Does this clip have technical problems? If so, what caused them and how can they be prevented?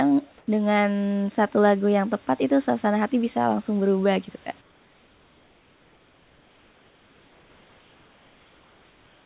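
Yes. Comfort noise in place of the background appears at 0.38–0.47 s and from 4.61 s onward. The room noise becomes a smooth, featureless hiss, about 2 dB louder then about 4 dB quieter, showing as flat, textureless bands on a spectrogram. Discontinuous transmission is the likely cause. Disabling DTX on the sender prevents it.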